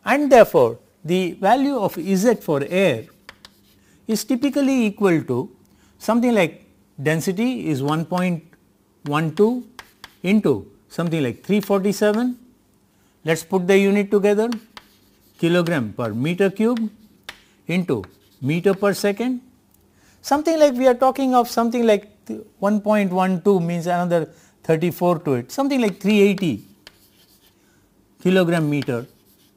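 From start to finish there is crude rate conversion. The sound was resampled without a proper filter, by repeating or skipping samples to the nearest one. The error pattern points to a change from 44.1 kHz to 48 kHz. That stepwise error sits roughly 30 dB below the signal. It forms shifted, inharmonic copies of the audio. They are heard as a gritty, inharmonic fizz that rides on loud and high-pitched passages.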